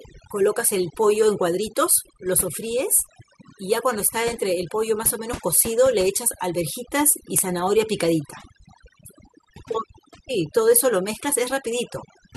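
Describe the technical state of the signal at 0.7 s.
At 0.7 s the speech carries overdone noise removal, present throughout the clip. Bands near the estimated noise floor are pushed down or cut, taking quiet speech detail with them. The result is speech over near-silence with twinkling specks, unlike a noise gate, which mutes everything at once.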